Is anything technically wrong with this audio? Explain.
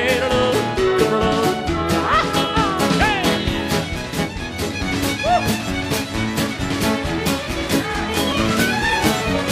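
Yes. There are two brief skips, at 7.26 s and 8.32 s, each likely a dropped buffer (overrun): samples were overwritten before being collected, so roughly 10 ms of sound vanishes and the surrounding audio is joined directly, heard as a sudden jump forward without any gap of silence.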